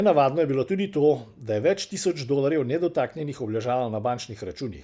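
Listening through this short speech recording, nothing technical stood out as wrong.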